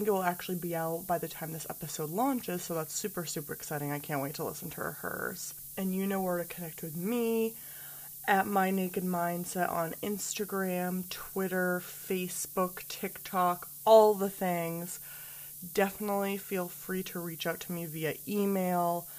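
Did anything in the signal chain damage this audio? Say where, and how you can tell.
Yes. It happened at a sample-format conversion stage. The speech was requantized to what sounds like just 7 bits, and the rounding error was noise-shaped upward. You can hear this as low bit depth with noise shaping across the whole clip: a steady, thin hiss that gets much brighter toward the top of the band. It sits only around 10 dB under the speech. The shaping doesn't make that error go away. It just moves it up in frequency.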